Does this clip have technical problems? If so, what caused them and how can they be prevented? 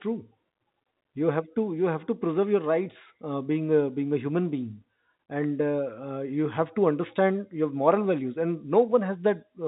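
No, the speech here carries no technical faults, only the expected narrow band of G.711 telephone coding, which fits a 64 kbps mu-law path and leaves nothing above about 3.8 kHz.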